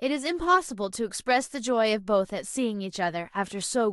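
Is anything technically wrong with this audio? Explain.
No, nothing is technically wrong with this audio. The speech comes through without any audible fault.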